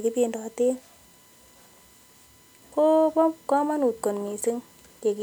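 Throughout, a USB whine: 1 ms bus frames leak in as a fixed 1 kHz tone, strongest at 7 kHz, far above mains hum.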